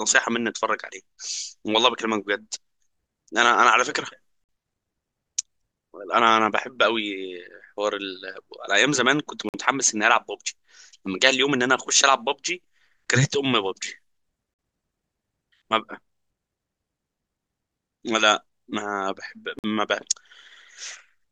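It's a speech clip with a gap between chunks: four short holes of dead silence, each 50 ms long, starting at 4.44, 9.49, 14.54 and 19.59 s. They land every 5 s, so the audio was clearly handled in 5-second chunks with a little silence dropped in at each join. Nothing's actually missing, but those holes interrupt the speech briefly each time.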